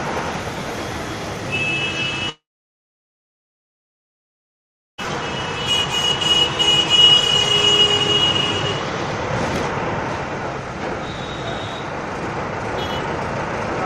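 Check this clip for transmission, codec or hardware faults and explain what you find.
A long network dropout runs from 2.29 to 5.06 s. The sound smears into a short, fading buzz, then 2.56 s of near silence follows. Incoming audio likely stopped arriving. When sound returns, 1.6 s is missing and timing has shifted by roughly a second.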